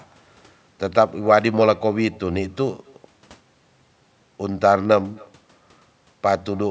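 Right from the start and all the way through, there's echo with no canceller: the far end's loudspeaker feeds back into its microphone, so every phrase returns roughly a third of a second later as a faint, thin copy, sitting about 28 dB below the speech.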